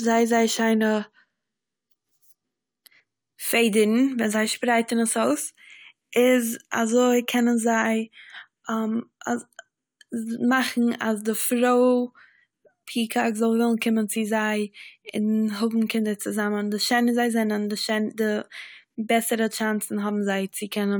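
Speech recording, with nothing technically wrong with it.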